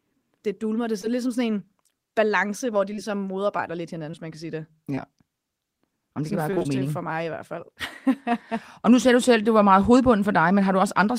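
Brief smears and wobbles break into the speech at 1.01 s, just before "er ligesom sådan en", then twice in quick succession from 2.93 to 2.99 s, again at 4.11 s, and at 4.95 s, right after "man kan sige det". Each is short concealed packet loss. About 20 ms of audio failed to arrive in time, and the receiver bridged the hole by continuing the preceding sound for 10 to 19 ms before blending back into the real signal.

From 6.51 to 6.68 s, just after "det kan", the sound turns choppy, with pieces dropping out. This is repeated packet loss. About 80 ms went missing in several holes, the longest around 23 ms, which fits a run of four lost 20 ms packets. Roughly half of this 0.17 s stretch is patched-in continuation rather than real audio, so the concealment never fully recovers before the next hole arrives.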